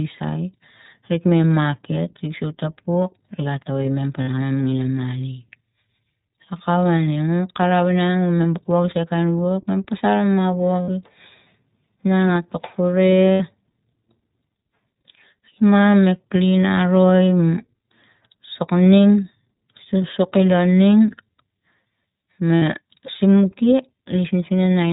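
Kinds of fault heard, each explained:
iLBC codec: the whole speech recording is squeezed through a narrowband VoIP codec, about 15 kbps in 20 ms frames, so nothing above 4 kHz survives and the voice sounds plainly rough and synthetic. A spectrogram shows a hard ceiling at 4 kHz with an empty band above.
lost iLBC frames: four short dropouts of about 60 to 80 ms, near 4.2, 10.8, 13.3 and 22.6 s, where the decoder repeats the last pitch cycle with added noise, heard as a brief buzzy held vowel. On a spectrogram each shows as a smeared, steady harmonic patch before normal speech resumes immediately.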